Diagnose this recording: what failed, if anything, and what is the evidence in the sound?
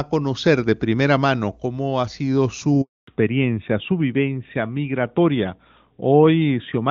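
A handover gap at the network stage. Right after "mano cómo ha sido", the speech dies away at 2.81 s. Silence follows until 3.07 s, a 260 ms hole. The call was switching networks, and no speech frames arrived meanwhile. Those syllables are lost.

A fallback to narrowband, also at the network and codec stage. From 3.07 s to the end, nothing remains above 4 kHz. Before the gap, the clear HD Voice band reached to about 7 kHz. Afterwards, speech sounds duller and rougher, which fits a 12.2 kbit/s AMR narrowband link.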